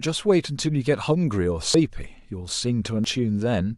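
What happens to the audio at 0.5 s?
Nothing goes wrong at 0.5 s; the speech there plays through intact, with no dropout, click or distortion.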